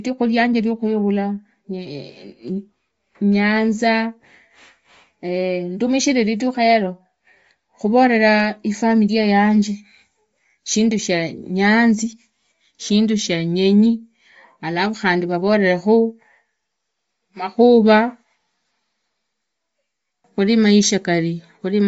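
Throughout the speech nothing reaches above 7.7 kHz, and the top of the band sounds grainy and breathy, likely Bluetooth LC3 compression at a rate near 32 kbps. That noise-filled upper edge, rather than a clean roll-off, separates it from plain band-limiting.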